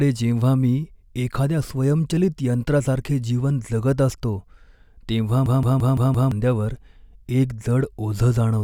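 From 5.46 to 6.32 s, a system hang loop stalls the driver while the hardware keeps cycling one 171 ms slice, fitting an 8192-sample buffer: a machine-gun stutter at 5.86 Hz. Unlike concealment repeats, all five passes are identical, and about a second is lost.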